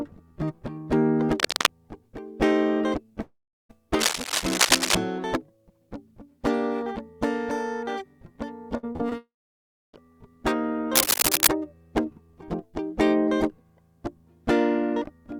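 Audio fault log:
1.34–1.66 s, 3.99–4.95 s and 10.95–11.48 s, cable scratch noise: dense, uneven bursts of scratching and rustling ride over the music. The first two are about as loud as the music and the last is somewhat louder. The likely cause is a worn cable, connector or control being moved, with its contact resistance changing rapidly. Unlike a network fault, the music keeps playing underneath, with noise added on top rather than pieces removed.
3.21–3.71 s and 9.18–9.95 s, long network dropout: audio stops arriving, most likely because of an interruption on the network. The receiver continues the last sound as a fading buzz or hiss for roughly a tenth of a second, then leaves silence for about 0.36 s and 0.64 s respectively. Around 0.48 s and 0.76 s of music are lost, and playback resumes further on. Unlike a scratch, the music is removed rather than covered by added noise.
8.77–9.16 s, repeated packet loss (robotic sound): five short holes, the longest 55 ms, come in quick succession, with about 140 ms of music missing in total. 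Each hole is patched by stretching the preceding sound, so about a third of this span is concealment, which gives a choppy, robotic texture. It differs from the dropout that follows at 9.18 s because the gaps are brief and repeated rather than one long silence.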